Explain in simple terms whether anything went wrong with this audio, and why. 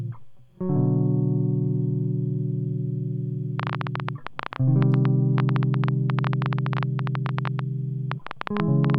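From 3.6 s to 8.95 s, a train of clicks ticks over the music, about 11 per second at an uneven pace. Likely cause: nearby equipment interference.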